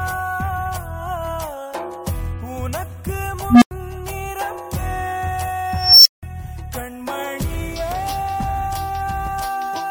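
Two bursts from an unstable filter: at 3.50 s a low tone near 200 Hz swells over about 117 ms, clips, then drops to silence for about 93 ms; at 5.72 s a high tone around 5 kHz builds over 338 ms before a 174 ms dropout, as runaway feedback overflows and resets.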